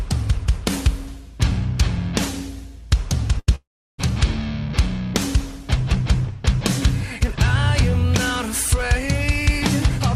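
A burst of packet loss at 3.39 to 3.49 s cuts about 80 ms from the audio. Several consecutive packets failed to arrive in time, so the receiver stretched the last sound it had into the gap, a held buzz or fading hiss lasting roughly 78 ms and dimming as it goes. Playback then picks up slightly further along, with that stretch of the original skipped. A long network dropout follows almost immediately, from 3.55 to 4.00 s. About 440 ms of audio is missing. The receiver again carries the last sound forward, but the concealment decays quickly, and most of the gap, around 350 ms, is plain silence. This is likely a stall in the connection rather than a few lost packets, because the outage is far longer than a short burst and the concealment runs out partway through. When the audio returns it jumps forward past the lost section.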